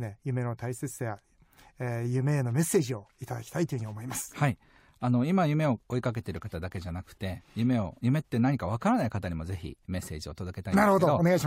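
A recording of speech, with no technical faults to report. Nothing in the audio calls for a time stamp or a cause.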